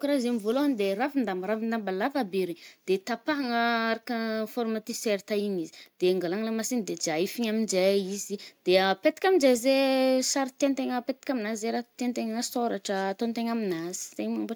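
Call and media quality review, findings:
No faults found on review of the speech clip; nothing to action.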